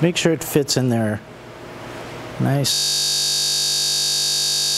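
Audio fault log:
2.74 s to the end, system hang loop: the system froze while the sound hardware kept cycling the same 20 ms stretch of its ring buffer, 102 times over. That short loop repeats at 50 Hz, so the audio turns into a steady buzz at that rate.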